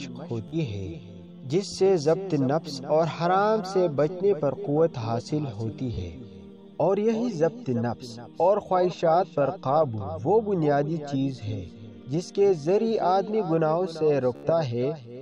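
Bluetooth stutter hits at 0.48–0.56 s, 5.94–6.00 s and 14.36–14.46 s. Dropped packets make the receiver loop its last slice, giving short buzzy repeats before the sound jumps ahead.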